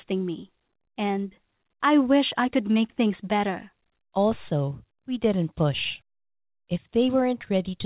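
From 0.04 s to the end at 7.86 s, the speech carries repeated timing corrections: small, unevenly spaced hiccups where tiny slices of audio are skipped, so the delivery runs at about 104 percent of its natural pace with a faintly uneven tempo. Unlike packet loss, there are no silent gaps or smeared concealment patches. Unlike a clean speed change, the pace lurches in little jumps rather than shifting smoothly.

The underlying fault is clock drift between sender and receiver. The sending side's clock runs around 4 percent fast, so the jitter buffer keeps overfilling, and the receiver has to trim short pieces again and again to stay in step. Because the sender is fast, every edit is a cut and none is a repeat. That one-directional pattern recurring across the whole clip marks drift rather than random network jitter. It all sits within a narrowband call path with nothing above 4 kHz, which fits 64 kbps G.711 A-law.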